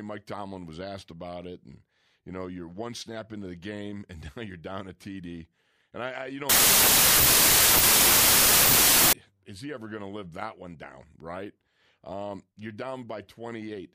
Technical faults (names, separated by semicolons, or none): wrong sample width